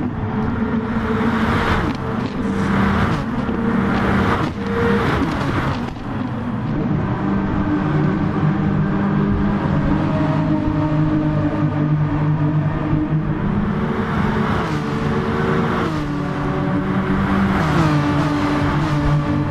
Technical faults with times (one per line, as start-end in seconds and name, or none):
3.74 damaged data in a compressed stream